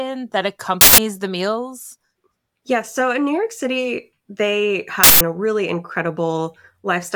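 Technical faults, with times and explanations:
0.81–0.98 s and 5.04–5.21 s, uninitialised buffer: twice, a harsh burst of loud digital noise cuts across the speech for about 170 ms. A block got played before any audio was written into it, so leftover memory came out as samples. That length fits an 8192-sample block.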